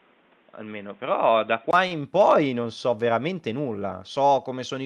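A speech clip. From the start to 1.73 s, nothing sounds above 3.8 kHz. The sound is dull and boxy, with a faint new noise floor well below the speech. The level stays about the same. At 1.73 s the sound opens up again after a gap of about 20 ms. The likely cause is an input switched to a poorer device, such as a headset's call profile, which passes a narrower band than the later input. After the switch, the top reaches about 12 kHz, which fits the Opus call path. Between 1.87 and 2.03 s there is a short stall from a late packet, just before "poi non so veramente". A packet arrived late and the jitter buffer ran dry. The receiver held the last sound for 33 ms until the data came. It then resumed from the same spot. Nothing is lost, but that sound drags briefly, and everything after it sits 33 ms later.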